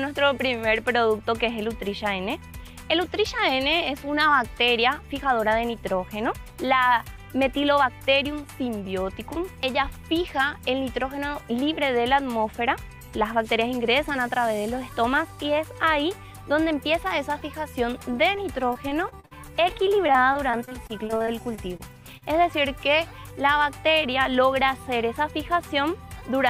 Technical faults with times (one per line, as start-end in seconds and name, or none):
18.35-19.33 repeated packet loss (robotic sound)
19.69-21.81 repeated packet loss (robotic sound)
22.17-22.23 short concealed packet loss